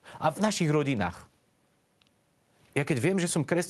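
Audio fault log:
Nothing to log here, as the speech comes through the Opus call path as expected, with its top end stopping around 12 kHz.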